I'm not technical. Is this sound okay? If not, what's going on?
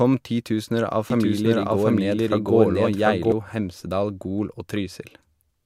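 No. The speech has a doubled audio track, likely from the same recording being picked up a second time through a slower route. From 1.10 s, right after "titusener av", until 3.32 s, a second copy of the speech plays about seven tenths of a second behind the first, just as loud. It sounds like the same words being said twice, out of step. The copy switches on and off suddenly rather than fading like an echo.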